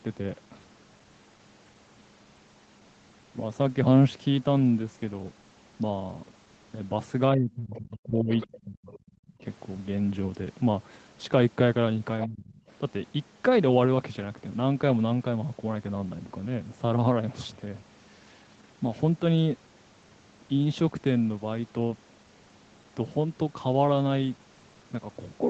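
From 7.35 to 8.31 s the speech sinks by up to about 25 dB. This is speech suppressed in double talk, likely an echo canceller turning down the near talker while the far side also spoke. It returns from 8.65 to 9.0 s, dropping about 35 dB, then from 9.28 to 9.45 s by about 20 dB, and from 12.27 to 12.6 s by about 25 dB. Between 8.35 and 8.57 s a faint second voice appears, about 15 dB below the speech. This is the other side's voice leaking through, likely loudspeaker echo the canceller did not remove. A brief scrap returns at 12.22 to 12.27 s, about 10 dB down, just before the last dip.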